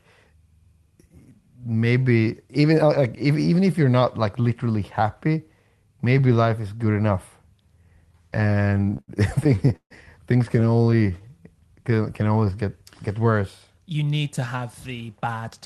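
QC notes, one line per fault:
8.33–9.92 s and 10.48–11.25 s, repeated stalls (stutter): the speech keeps catching and dragging. In the first run there are 20 little holds adding up to 412 ms, the longest 144 ms, so about a quarter of that stretch is stretched-over sound. The second run has 12 tiny ones, none over 17 ms, 120 ms in total. Packets were showing up late, the buffer kept running dry, and the receiver held the last sound until data came. Nothing's actually lost.
10.96–11.42 s and 11.82–12.67 s, jitter buffer slow-down: overlapping the end of the stutter the delivery goes a bit syrupy, playing at 91% and then 88% speed, with 50 ms and 109 ms added. The second one leads straight into "get worse". Pitch stays put because the receiver is repeating single pitch periods and slivers of pauses to rebuild its reserve, so you get drawn-out sounds rather than a lower voice.
14.94–15.42 s, jitter buffer speed-up: just after "need to have" things rush along at about 110% speed, with roughly 50 ms trimmed out. 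The buffer had more backed up than it wanted, so it snipped out short pitch-period chunks to cut the delay. The pitch stays the same, it just sounds hurried. All of this rides on the Opus call path, whose band tops out around 12 kHz.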